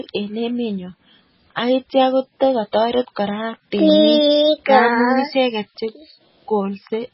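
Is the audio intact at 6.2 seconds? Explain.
No, at 6.2 s the speech sounds watery and swirly, with nothing above 5.6 kHz, as throughout the clip, likely from heavy MP3 compression at a very low bitrate, around 16 kbps.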